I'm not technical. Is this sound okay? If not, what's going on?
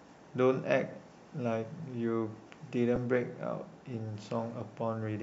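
No. At about 2.96 to 2.98 seconds the speech has a tiny blip, a brief hissy smear. That is lost LE Audio frames: the Bluetooth link dropped a piece of sound, likely one 10 ms frame, and the receiver filled the gap with a noisy guess.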